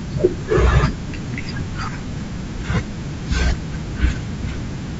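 No technical faults can be heard anywhere in this speech recording. Nothing in the sound shows any break, distortion or dropout.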